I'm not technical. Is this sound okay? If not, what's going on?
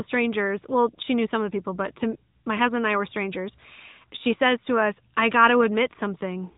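No. Throughout, the speech has the AMR narrowband mobile codec sound: nothing above 3.8 kHz, plus a buzzy, synthetic edge that simple muffling wouldn't add.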